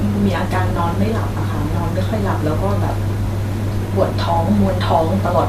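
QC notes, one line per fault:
No faults found in this speech clip. Nothing here needs a timestamp or a note against any part of the audio.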